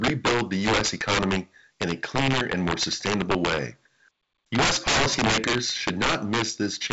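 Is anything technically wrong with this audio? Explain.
Yes. Integer overflow runs throughout the speech. The signal is pushed about 14 dB past the largest value the integer format can hold. Instead of being limited at full scale, each excess sample wraps around to the opposite sign and jumps across the whole range. Roughly 4 percent of samples go over, so the loudest syllables break into violent cracks and snaps, far harsher than ordinary clipping. The wideband telephone-style band limit, with nothing above about 7.7 kHz, sits underneath.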